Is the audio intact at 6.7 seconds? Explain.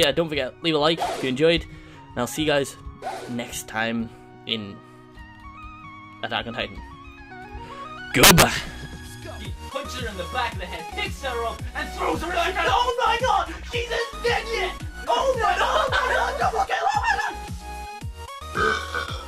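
Yes, the audio at 6.7 seconds is intact, with no dropout, click, distortion or other fault at that moment.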